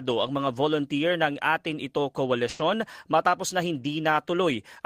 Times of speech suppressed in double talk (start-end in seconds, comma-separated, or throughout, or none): none